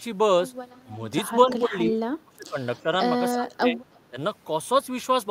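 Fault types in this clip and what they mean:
Echo leak: a faint delayed copy of the speech returns about 320 ms after the original, in short scraps at 0.75, 1.5 and 2.77 s. The scraps at 0.75 and 2.77 s sit about 35 dB below the speech, and the one at 1.5 s is louder, about 20 dB down. This likely comes from a loudspeaker echo that the far end's canceller failed to remove. Unlike reverberation, which smears the sound continuously, this is a separate repeat at a fixed lag.
Speech suppressed in double talk: the speech drops out in patches at 1.52 to 1.74 s, 2.24 to 2.58 s, 3.34 to 3.81 s and 4.1 to 4.17 s, dipping by about 15 to 25 dB. The longest stretch is about half a second. The likely cause is an echo canceller that mistook overlapping talk for echo and turned everything down. Unlike a network dropout, the level dips and thins rather than going abruptly silent, and these dips fall where both ends are active.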